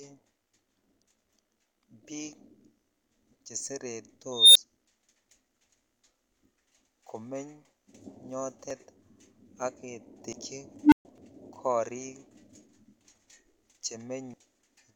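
At 4.32 s an unstable filter erupts: a high whine around 4 kHz swells over about 233 ms, clips, then cuts to a 10 ms silence as the runaway recursion overflows and resets. At 8.70 s the speech jumps ahead, skipping roughly a tenth of a second, which is likely a dropped buffer (overrun). Unlike a dropout, no gap is left because the two sides are spliced directly. The same skip recurs at 10.33 s, losing around 150 ms. From 10.83 to 11.05 s a second unstable filter fault grows a low tone of about 300 Hz in 87 ms, then goes silent for 130 ms. Further skips follow at 11.18 s (around 150 ms lost) and 14.34 s (roughly 300 ms).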